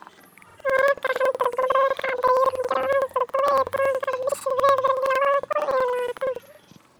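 Planar audio read as interleaved throughout: separate left and right blocks of about 93 ms, which fits 4096 samples, play back-to-back at double speed, so speech sounds an octave high, fluttering near 10.8 Hz.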